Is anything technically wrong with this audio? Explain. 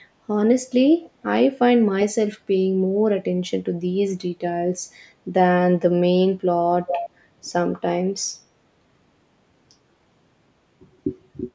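Yes. There are two bursts of echo leak: a faint one from 1.01 to 1.11 s, around 30 dB below the speech, and a much stronger one from 6.87 to 7.1 s, only about 5 dB down. Each is a delayed copy of the speech, arriving roughly 0.46 s and 0.41 s after the original. The likely cause is a far end on loudspeaker whose echo canceller let some of its microphone pickup back into the call. Room reverberation would be different, a smooth tail starting at once. This is a distinct repeat after a clear gap.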